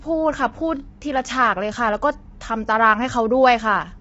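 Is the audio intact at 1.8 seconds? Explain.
No, at 1.8 seconds the speech carries the same damage it has from start to finish: likely low-delay AAC compression. Its short frames can't pin down the pitch harmonics, so the sound goes rough and grainy, with nothing above 7.8 kHz, which fits a starved bitrate around 24 kbps.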